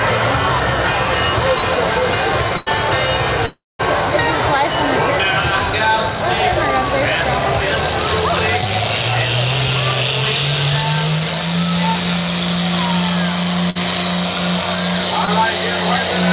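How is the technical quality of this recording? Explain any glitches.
The recording has repeated packet-loss glitches from a network call, and the band stops at 4 kHz, which fits a narrowband telephone codec such as G.711 mu-law at 64 kbps.

Short concealed packet loss occurs at 1.58 to 1.64 s, 8.61 to 8.68 s and 15.25 to 15.29 s. Each time, a sliver of audio, about 20 to 40 ms, never arrived in time. The receiver papered over it by extending the preceding sound, then crossfaded back. At 8.61 s the patch also stretches the timeline by roughly a hundredth of a second. Each one is heard as a brief smear or wobble.

Burst of packet loss hits at 2.57 to 2.68 s and 13.70 to 13.77 s. Consecutive packets went missing, 100 ms in the first case and 60 ms in the second. The receiver kept reproducing the last sound while fading it down, about 93 ms and 54 ms of substitute audio. The result is a held buzz or fading hiss, after which the audio resumes slightly further on with the missing stretch gone.

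A long network dropout runs from 3.46 to 3.81 s, likely caused by the connection stalling. About 340 ms of audio was lost. Concealment first stretches the previous sound into a decaying buzz or hiss, then gives up, leaving roughly 210 ms of silence. The audio returns past the gap, so whatever fell inside it is simply absent.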